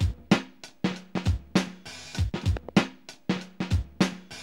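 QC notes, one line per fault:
1.17–1.29 s and 2.57–2.71 s: loud pop, each a double pop roughly 10 dB above the sound, which continues underneath rather than dropping out. A voltage step is the likely cause, perhaps from a switch or static.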